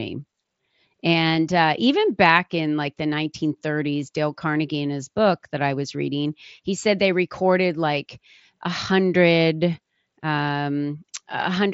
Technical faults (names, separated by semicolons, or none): none